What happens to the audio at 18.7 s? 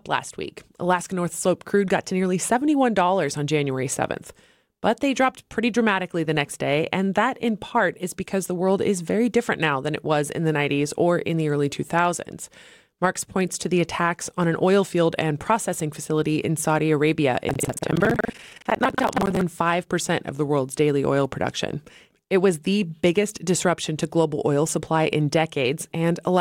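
At 18.7 s the audio is inside a stretch of buffer tearing running from 17.46 to 19.42 s. Writer and reader have slipped, so roughly a third of each buffer replays audio from about 150 ms earlier. The result is a steady 21.5 Hz robotic rattle, which fits a 2048-sample buffer. Unlike an underrun, it leaves no silent gaps.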